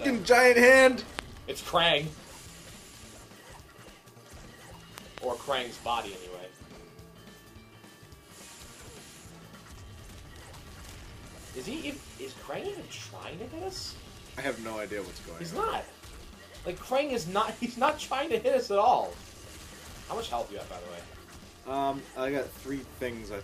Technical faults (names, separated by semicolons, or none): loud pop